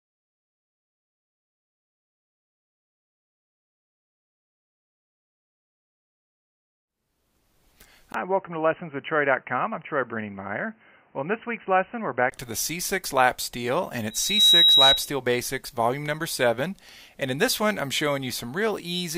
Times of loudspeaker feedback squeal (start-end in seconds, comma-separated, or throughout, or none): 14.10-15.11